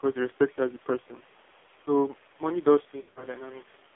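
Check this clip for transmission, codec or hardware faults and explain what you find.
Two faults are audible: heavy narrowband mobile coding throughout, and lost speech frames near the end.

AMR narrowband mobile codec, throughout: a low-bitrate AMR-NB mode, likely near 5.9 kbps, confines the speech to about 300 Hz to 3.6 kHz, giving it a buzzy, synthetic quality.

Lost AMR speech frames, 3.02 to 3.25 s: failed frames force the decoder to repeat earlier settings at falling gain, so about 140 ms of speech warbles, drops and fades. The gaps are scattered over 200 ms, with the longest run lasting 60 ms.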